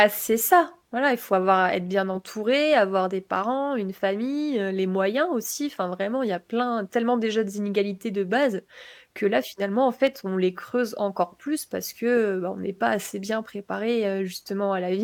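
Between 10.07 and 10.44 s the speech carries three CD scratch ticks. A blemish on the disc wiped out more data than error correction could rebuild on successive turns, so the player patched or muted the damaged samples. Each tick is a short click, the longest about a millisecond. On the waveform they appear as tiny notches or flattened spots spaced at a steady interval. On a spectrogram they show as thin vertical lines spanning the band.

At 12.17 s a corrupt frame was decoded. Flipped bits in what sounds like a single compressed frame were played as if valid, so misread gains and codes put energy at frequencies that don't belong to the speech. It is heard as a brief chirp or blip, peaking around -25 dBFS. A spectrogram shows a small, sharply bounded block or streak of misplaced energy. The waveform shows a short burst whose shape breaks from the signal around it.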